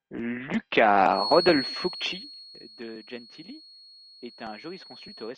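From about 1.08 s a thin, steady whistle at 4.3 kHz settles in behind the speech and stays right to the end, sitting maybe 10 dB under the voice and swelling and fading slowly in level. That's a feedback whistle, most likely the speaker-to-mic loop hovering right at the edge of feedback, so one frequency keeps ringing without ever building into a full howl.

Then, between 1.42 s and 2.93 s, the level drops by something like 15 dB, but not cleanly. It comes down in 2 dB jumps, roughly five a second, and each jump leaves a small click. Together they make zipper noise, a ticky, zipping texture laid over the speech only while the level is moving. It sounds like the gain was being stepped in coarse chunks with no smoothing between them.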